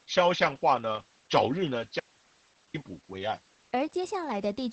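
Opus voice compression runs through the whole clip. The speech is coded with the SILK linear-prediction coder at a low rate, which sounds close to 10 kbps. At that rate the band is trimmed to wideband, with nothing above 8 kHz, so the sound is dull and muffled. The excitation is coded so coarsely that the speech comes out hoarse and slightly robotic, with the damage heavy on every 20 ms frame.

An audio dropout to a faint residue runs from 2.00 s to 2.74 s. The speech cuts off abruptly for about 0.74 s and returns just as suddenly, with none of the gradual change of a pause or fade. The gap is not silent. It holds a faint hiss about 35 dB below the speech. The likely cause is that the signal feeding the path was lost for that stretch while the chain after the break stayed live and passed its own noise.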